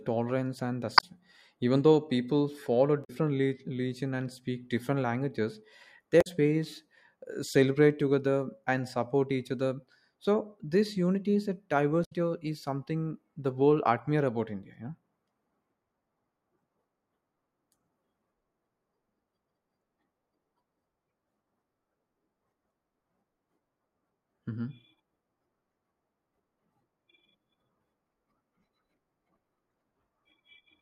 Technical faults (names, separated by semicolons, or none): damaged data in a compressed stream